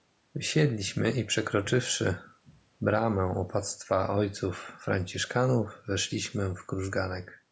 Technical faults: none

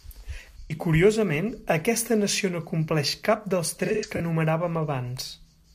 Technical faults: AAC frame loss with concealment

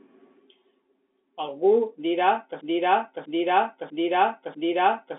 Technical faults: broken-record loop

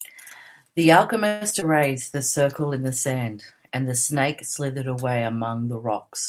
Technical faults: call audio freeze; short concealed packet loss; call bitrate drop

